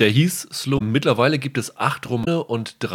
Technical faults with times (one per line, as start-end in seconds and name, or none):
0.75-0.82 damaged data in a compressed stream
2.21-2.28 damaged data in a compressed stream